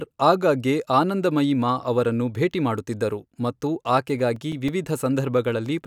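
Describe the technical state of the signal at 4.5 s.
At 4.5 s you're in the middle of a run of CD scratch ticks, spanning 3.71 to 5.17 s right after "ಅವರನ್ನು ಭೇಟಿ ಮಾಡುತ್ತಿದ್ದರು ಮತ್ತು". A blemish beats the error correction once per disc revolution, so the player patches or mutes samples, giving about ten regular ticks, each at most a few milliseconds long.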